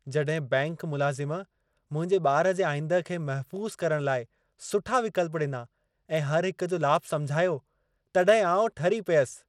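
From start to finish the speech carries plainly audible codec damage: a gritty, grainy texture sits on the sound and the upper range sounds unsteady. Content reaches up to about 21 kHz, so the top is not simply cut off. It is coarsely coded. This is likely Bluetooth SBC compression at a low data rate, which fits roughly 96 kbps. SBC splits the signal into a few wide sub-bands and shares bits without a hearing model, so quantisation noise and aliasing become audible.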